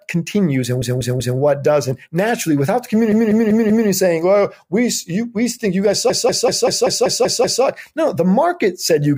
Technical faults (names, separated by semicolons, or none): repeated frames